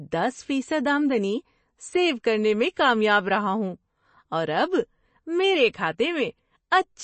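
MP3 compression throughout this speech clip: the treble stops at 8.3 kHz and the damage is plainly audible, likely from a bit-starved MP3 encoder, which fits about 32 kbps.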